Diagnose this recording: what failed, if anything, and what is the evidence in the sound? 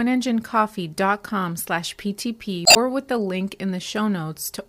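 The codec stage failed: damaged data in the compressed stream. From 2.63 to 2.77 s, just before "with the", the decoder misreads corrupted frames and loses sync, giving a brief disruption. A spectrogram shows a break in the speech harmonics; the waveform shows an abrupt discontinuity.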